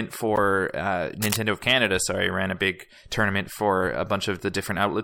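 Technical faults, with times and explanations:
0.36–0.38 s, corrupt frame decoded: one damaged compressed frame was played anyway, so misread data threw energy to wrong frequencies, giving a sharp, loud blip.
1.22–1.37 s, cable scratch noise: a brief, dense rustling scratch nearly as loud as the speech, likely from a worn cable or connector shifting its contact resistance.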